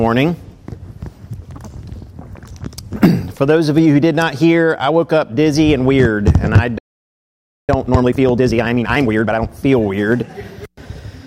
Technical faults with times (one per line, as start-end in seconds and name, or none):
6.78-7.69 playback stall
7.69-9.49 time-compressed catch-up